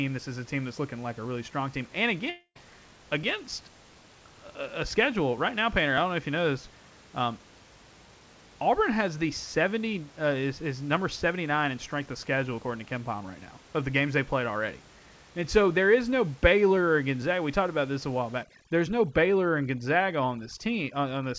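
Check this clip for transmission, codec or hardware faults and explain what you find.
Two faults stand out in this speech clip.

Long network dropout, 2.30 to 2.57 s: audio likely stopped arriving, so the receiver stretched the last sound into a fading buzz before 70 ms of silence. About 260 ms of speech is lost.

Overdone noise removal, 18.43 s to the end: an over-aggressive noise reducer shuts off bands near its noise estimate. The room noise, about 26 dB down, becomes twinkling specks.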